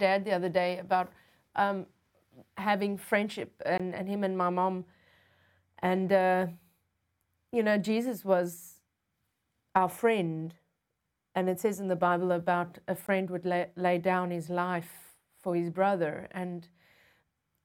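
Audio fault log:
3.78 s and 13.07 s: block of digital silence. Two gaps of about 20 ms each, the first between "having friendship" and "and him and my", the second between "about a" and "would lay lay down". The speech drops straight to zero and returns with no fade, and the gap is heard as a short hole. The identical length points to a whole output buffer missed because the output buffer was not filled in time.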